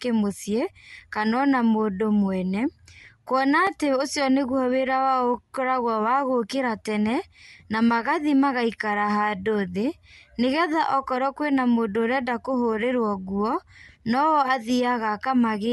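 The clip is speech, and at 3.67 s, just after "ona mũndũ mwene kuona", there is a block of digital silence only 2.9 ms long, which fits a 128-sample block. Because the signal stops and restarts abruptly, it is heard as a tick rather than a gap. Unlike a lone click, nothing is added to the sound; it briefly disappears. The cause is either an output buffer that was not filled in time or a calculation that produced invalid values.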